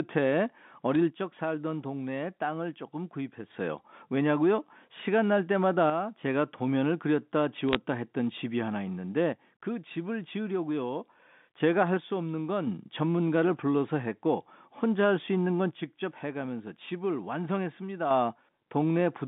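Bit errors on a digital phone line appear first at 0.95 s, hitting two frames, and again from 7.69 to 7.75 s as a brief burst of crackle. Bits were flipped in the 64 kbps G.711 mu-law stream at a rate of a small fraction of a percent. Each flipped bit corrupts one sample, so hits on sign or high-order bits throw out isolated spikes that ride on top of otherwise unaltered speech.

One channel drops out from 1.10 to 3.50 s and again from 15.71 to 18.11 s. Throughout both spans the speech falls abruptly by about 6 dB and then jumps back up at the end. The likely cause is one stereo channel going silent before the mono fold-down, which halves everything the two channels shared and removes anything carried only by the lost side. The narrow 150 Hz to 3.6 kHz telephone band of the G.711 path stays the same across both drops.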